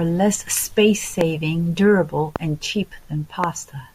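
Loud pops at 1.21–1.23 s, 2.36–2.38 s and 3.44–3.46 s: each is a single sharp crack, roughly 15 dB above the speech, which carries on underneath. A brief voltage spike, likely from a switch, static or a driver glitch, lands on the signal each time.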